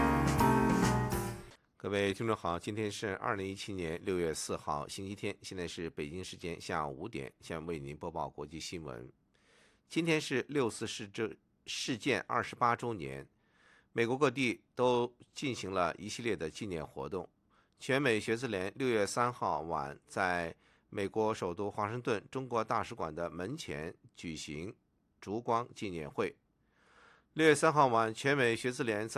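No technical faults are audible.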